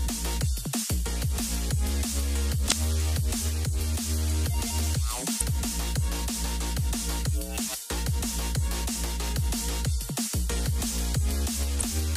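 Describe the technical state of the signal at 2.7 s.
At 2.7 s there is damaged data in a compressed stream, spanning 2.68 to 2.72 s: corrupted bytes make the decoder misread frames and lose sync, producing a brief chirp or squawk. A spectrogram shows a short broadband smear; the waveform breaks abruptly.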